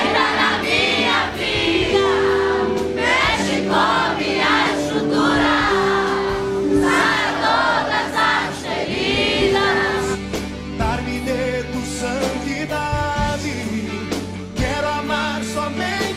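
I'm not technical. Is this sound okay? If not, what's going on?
Yes, nothing wrong can be heard anywhere in it.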